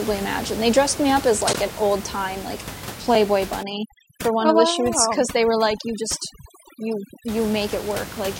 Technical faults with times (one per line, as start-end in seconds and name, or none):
1.53 block of digital silence
3.63-7.28 overdone noise removal
5.77 block of digital silence